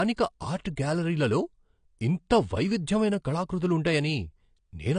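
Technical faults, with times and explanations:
Throughout: low-bitrate audio saved at a high bitrate. The speech has nothing above 9.8 kHz and carries the artefacts of a lean first encode, likely something like 32 kbit/s AAC, now sitting inside a roomy 192 kbit/s MP3 that can't bring any of it back.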